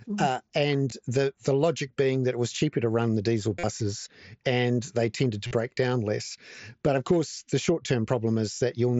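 Around 0.90 s there's a concealed Bluetooth headset packet loss. Longer runs at 3.59–3.64 s and 5.47–5.51 s are filled by repeating recent waveform, so they come across as a brief buzzy held tone with a slight warble as real speech returns.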